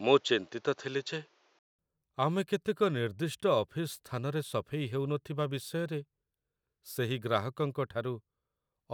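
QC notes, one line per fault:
0.00–1.79 s, input switched to a poorer device: likely a device change; spectrogram capped at 7.3 kHz, faint background noise, level shift, 200 ms waveform gap, then full band.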